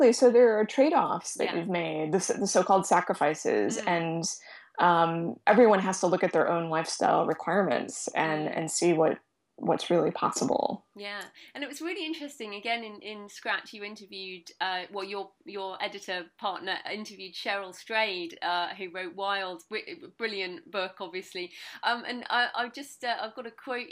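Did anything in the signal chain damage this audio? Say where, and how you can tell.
No, nothing in the signal chain audibly damaged this audio. None of the stages, from capture through to playback, leaves any mark that can be heard.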